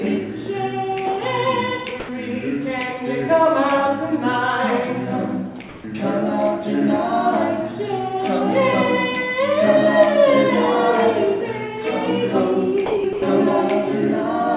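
At 2.0 s, the sender's voice detector likely judged the sound to be background and stopped transmitting, so the receiver substituted comfort noise. For 90 ms the sound drops out into steady, featureless noise until transmission resumes at 2.09 s.

From 5.69 to 5.84 s, the likely cause is discontinuous transmission during a pause. For 150 ms the real background, which sits about 21 dB below the loud parts, is swapped for synthetic comfort noise at the same level. The background's texture flattens into a smooth hiss.

The sound dropped by the voice detector recurs twice near the end. From 12.86 to 13.04 s it vanishes for 180 ms, and from 13.13 to 13.22 s for another 90 ms. Both times, steady noise stands in until the detector triggers again. This all comes through a G.711 A-law call path with nothing above 4 kHz.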